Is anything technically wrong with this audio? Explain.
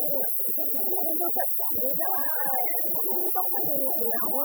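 Yes. Throughout the speech there is a steady, thin hiss that climbs sharply toward the treble. This is low bit depth with noise shaping: a signal that fits about 3 bits, its rounding error pushed upward in frequency, leaving noise within roughly 10 dB of the speech.

The speech also has a heavily damaged, watery, swirling texture throughout, with smeared attacks and metallic chirps on s sounds. The likely cause is MP3 compression at a low bitrate, around 32 kbps, where weak frequency lines are zeroed and flicker between frames.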